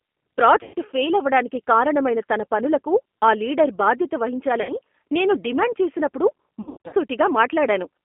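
Right from the start the whole clip runs through the G.729 codec at 8 kbit/s, squeezed into a 200 Hz to 3.4 kHz phone band. The speech is rebuilt from a filter, pitch and a few pulses per frame, so it comes out noticeably rough and synthetic.

Then there's VoIP packet loss concealed by the speech codec. Around 0.63 to 0.74 s, just before "ఫెయిల్ అవడానికి కారణమైన తన", about 110 ms goes missing. The decoder stretches the last sound into a buzzy tone or coloured noise that fades. At 4.62 to 4.77 s, after "పనులకు ఆ లీడర్ బాధ్యత", a shorter 70 ms gap does the same. From 6.61 to 6.95 s, after "నేను డిమాండ్ చేసినప్పుడు", about 250 ms is lost in scattered bits, the longest run 80 ms. The speech stays weak or distorted until it recovers.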